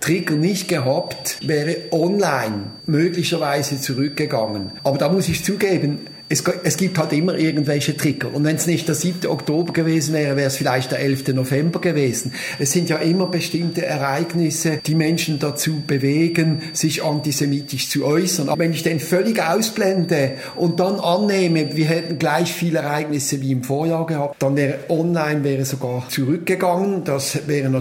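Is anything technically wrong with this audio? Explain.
Yes, there is a feedback whistle from the start until about 22.25 s. A loudspeaker-to-microphone loop, likely sitting just short of runaway, sustains a thin, steady 4.6 kHz tone roughly 20 dB below the sound, swelling and fading slowly in level. On a spectrogram it appears as a narrow horizontal line at 4.6 kHz, ending at 22.25 s.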